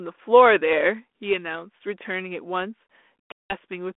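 At 3.32 s the speech cuts to a hard-edged silence lasting until about 3.53 s, packet loss on an ADPCM call with around ten packets dropped. The G.726 decoder's predictor and step size lose track, so speech resumes slightly distorted before settling.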